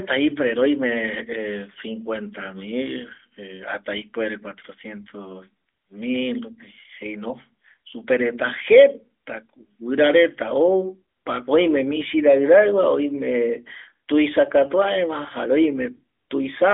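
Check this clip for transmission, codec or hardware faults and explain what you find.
I find no transmission, codec or hardware faults in this clip.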